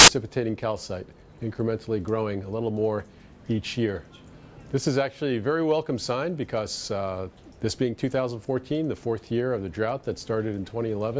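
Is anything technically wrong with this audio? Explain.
Yes. From 0.00 to 0.08 s there is a fault: file tags played as audio. The player reads an embedded cover picture as if it were samples. Its compressed bytes come out as very loud white noise. It is heard as a brief, harsh burst of static with hard edges.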